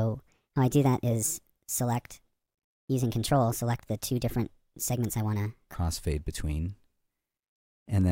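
From the start to 5.74 s the audio was likely played against the wrong clock, running at 1.35 times its recorded speed: a section at the wrong speed. Pitch rises with tempo, about five semitones higher, so the sound comes across hurried and raised until it drops back.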